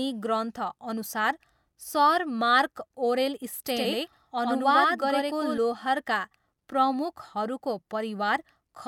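A second copy of the speech, likely picked up again by a slower path, is mixed in from 3.67 s to 5.58 s, just after "ग्रन्थअनुसार सर मार्क ओरेल". This doubled audio track trails by roughly a tenth of a second at about equal loudness, with no decay or room colour, and it cuts in and out abruptly.

At 3.84 s, inside that doubled stretch, damaged data in the compressed stream throws the decoder out of sync while it hunts for the next valid frame. It is heard as a brief glitch.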